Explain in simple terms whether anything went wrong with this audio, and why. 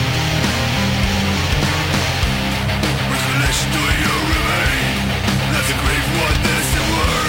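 Something went wrong when the audio's sample rate was changed. It was a crude rate conversion: the system stretched the sound onto a faster sample grid by simply repeating the nearest existing sample, without the filtering a proper conversion uses. The pattern heard fits a jump from 32 kHz to 44.1 kHz. Those repeated samples add a gritty, buzzing fizz that doesn't belong to the sound and rides along with its louder and brighter parts, from the first second to the last.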